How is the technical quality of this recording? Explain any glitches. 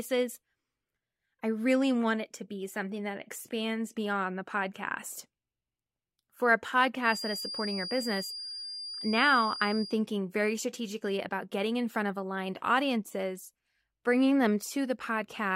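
The speech carries one clear fault, a feedback whistle, from 6.99 to 10.02 s. A thin, steady tone at 4.8 kHz sits behind the speech for about three seconds. It stays roughly 10 dB below the voice and swells and fades slowly in level. The likely cause is a loudspeaker-to-microphone loop balanced at the edge of feedback. That single frequency keeps ringing but never builds into a full howl.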